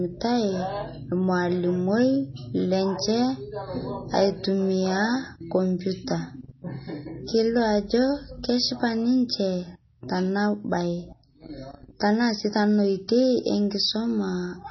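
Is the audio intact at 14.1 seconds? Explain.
No. At 14.1 s, as throughout the clip, nothing sounds above 5.9 kHz. The speech is watery and swirly with smeared attacks, likely from heavy MP3 compression at a starved bitrate.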